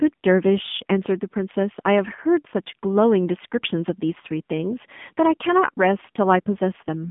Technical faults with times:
0.00-7.10 AMR narrowband mobile codec

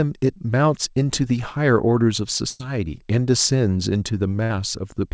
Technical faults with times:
2.50-2.61 burst of packet loss
4.43-4.52 burst of packet loss

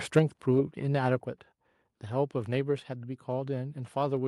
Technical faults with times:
0.16-0.19 microphone overload
0.19 microphone volume stepped down
1.20 microphone volume stepped down

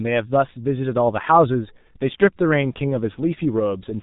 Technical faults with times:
0.00-4.02 G.723.1 codec

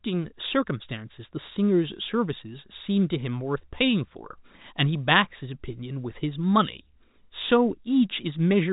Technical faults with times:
none

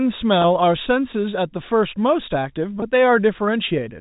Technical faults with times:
0.42-0.44 packet loss with pitch repetition
2.80-2.82 packet loss with pitch repetition

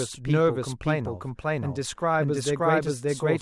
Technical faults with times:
0.00-3.42 doubled audio track

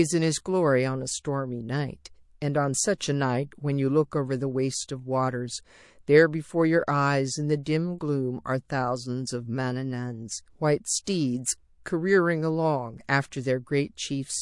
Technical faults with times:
0.00-14.41 MP3 compression
2.98-3.01 pre-echo
7.63-7.66 pre-echo
11.04-11.07 pre-echo

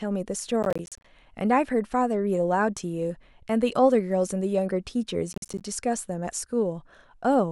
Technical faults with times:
0.63-1.04 processor overload crackle
5.33-5.61 processor overload crackle

